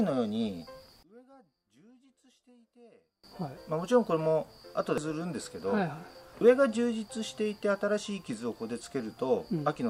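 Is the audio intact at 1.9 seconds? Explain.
No. From 1.03 to 3.24 s, which covers 1.9 s, the audio drops by about 31 dB to a faint remnant, and one channel inverted is the likely cause. With one stereo side's polarity reversed, whatever the two channels share cancels when they are summed to mono, so the centred content disappears. What remains is only the small difference between the channels, which sounds like a faint trace of the sound.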